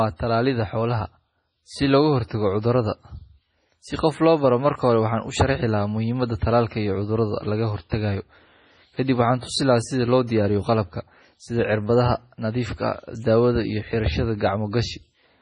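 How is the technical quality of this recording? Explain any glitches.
The recording has two audible problems: heavy compression damage across the whole clip and one brief pre-echo partway through.

MP3 compression, throughout: nothing remains above 10.5 kHz, and the speech sounds watery and swirly, with chirpy s sounds. This is likely a starved MP3 encoder that fits a low bitrate around 24 kbps, cutting the treble and dropping weak frequency lines that flicker between frames.

Pre-echo, 7.89 to 7.92 s: a hiss runs about 24 ms ahead of a sharp attack, which sounds softened. The codec spread quantisation noise, sized for the loud onset, across its whole block, so the noise also fills the quiet moment just before that onset.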